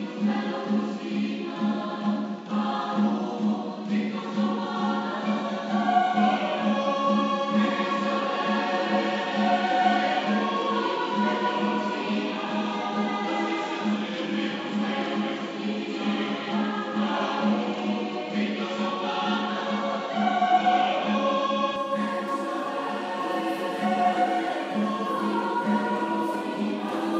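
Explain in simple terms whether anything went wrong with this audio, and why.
Something did go wrong for most of the clip. From the very start until 21.76 s the sound is dull and a bit boxy, with nothing above about 7.6 kHz, plus a faint extra noise in the background. At 21.76 s it suddenly opens up and sounds clearer, with no gap and no jump in loudness. That pattern points to an input switched to a poorer device, likely a lesser microphone or a headset in call mode, before switching back to the better one.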